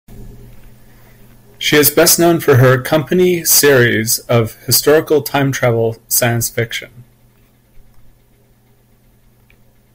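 From 1.68 to 5.67 s, and again from 6.14 to 6.59 s, the speech drives a stage beyond its limit, by about 9 dB and then about 4 dB, so hard clipping flattens the peaks. The longer stretch sounds harshly fuzzy; the shorter one crackles.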